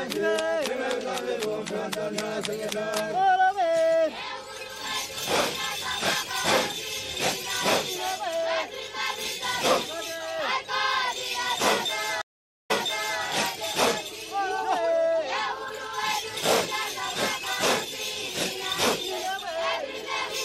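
From the start, the audio carries plainly audible MP3 compression damage, likely from encoding at a low rate that fits roughly 64 kbps. Short of bits, the encoder cuts the treble at a fixed point and drops weak frequency lines frame to frame, giving a watery, swirling texture and smeared attacks.

At 12.22 s a stream reconnect occurs. The connection dropped, leaving about 0.48 s of silence, and a fresh decoder picked up mid-stream. Playback resumes 0.52 s earlier than where it broke off, so a short stretch repeats, with the first moments muted or fading in, through 13.22 s.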